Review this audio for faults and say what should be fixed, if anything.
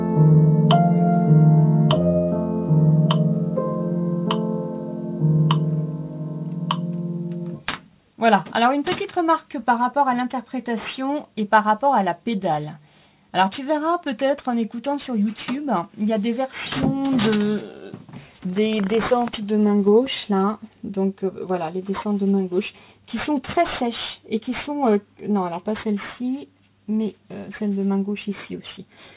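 Aliasing throughout: the sample rate was reduced, which fits a drop to 8 kHz, without an anti-alias filter, so content above 4 kHz folds back as gritty, metallic tones about 20 dB down. To prevent it, resample with a proper anti-aliasing low-pass filter below 4 kHz.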